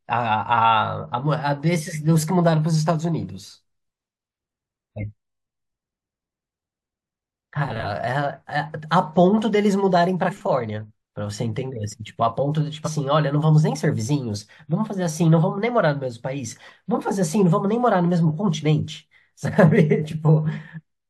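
Speech recording with two instances of compressed frames skipped. At 10.28 to 10.32 s the audio jumps forward by around 150 ms, which fits about four missing frames of 42.7 ms. At 12.84 to 12.88 s a shorter jump of around 40 ms points to a single lost frame. Whole coded frames were missing or rejected by the decoder as corrupt.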